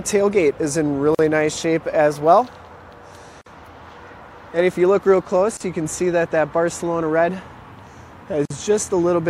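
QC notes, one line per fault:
1.15, 3.41, 5.57 and 8.45 s: gap at a join of encoded pieces. Continuous sound drops out for 42, 48, 34 and 50 ms respectively, with smeared edges, then resumes where it stopped, which fits separately encoded segments joined with untrimmed encoder delay and padding.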